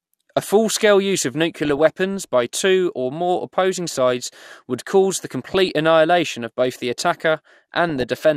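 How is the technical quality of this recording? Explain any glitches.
The speech is marred by three bursts of DAB burbling, at 1.65–1.86 s, 5.47–5.69 s and 7.89–8.17 s. A bit error rate of a fraction of a percent lets corrupted sub-band samples and scale factors through error correction, producing short blips of noise in single sub-bands and sub-bands jumping in level.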